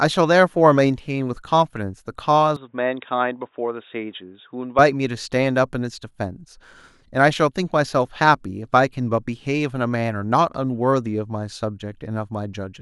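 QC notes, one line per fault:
2.56–4.79 s, input switched to a poorer device: the speech abruptly turns dull and boxy, with nothing above 3.8 kHz, then clears again, with no gap at either switch and no change in level. This is likely a change to a narrower-band microphone, which adds a faint noise floor about 50 dB down.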